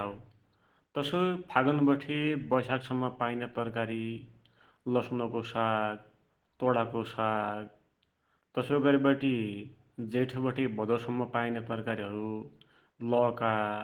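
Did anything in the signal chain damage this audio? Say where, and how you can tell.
Yes. Opus voice compression affects the whole clip, from start to finish, at the codec stage. The damage is plainly audible: the speech has a rough, slightly robotic grain from coarsely coded excitation. The top of the band still extends to about 20.2 kHz, so the encoder kept fullband audio and ran in hybrid mode, with SILK linear prediction below 8 kHz and a CELT layer above. The artefacts point to a low bitrate of around 16 kb/s.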